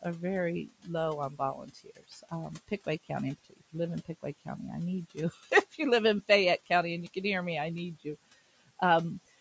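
At 0.68 to 0.9 s, 1.3 to 2.32 s, and 3.5 to 3.75 s just before "live in", the noise suppressor mistakes speech for noise and cuts it by about 16 to 17 dB. Brief stretches, and most of the middle one, come out swallowed and faint.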